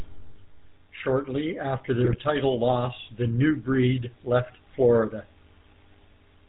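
From the start, the whole recording carries the GSM full-rate codec's buzzy, gravelly texture, plainly audible. The codec rebuilds the voice from a vocal-tract filter fed by sparse regular pulses and cuts everything above 4 kHz, which fits the old 13 kbps full-rate coder.

Then, from about 2.01 to 2.20 s, GSM bit errors break in: a short burst of squawks, pops and gargling. Corrupted filter, pitch and gain values warp or spike each hit frame, pointing to roughly ten damaged frames at around 1.4% bit errors.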